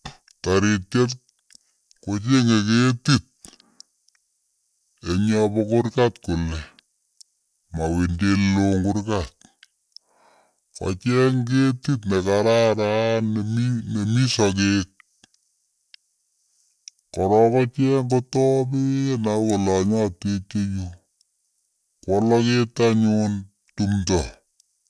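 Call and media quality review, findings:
Wrong sample rate, whole clip. Speech runs slow and deep: about 0.69x speed, pitch down roughly 6.5 semitones. Fits 32 kHz audio played at 22 kHz without conversion. Playback or resampling stage suspect.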